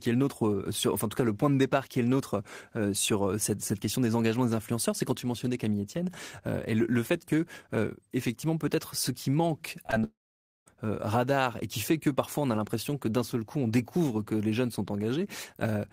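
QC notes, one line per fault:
9.83–9.94 s, short concealed packet loss: three back-to-back 20 ms gaps right after "ce qui manque" are patched by extending the preceding sound, giving a smeared wobble. The spectrogram shows a blurred patch.
10.04–10.68 s, long network dropout: the sound decays into a fading buzz or hiss, then about 0.52 s of silence, likely lost packets. The waveform goes flat until "radar et qui fait" resumes.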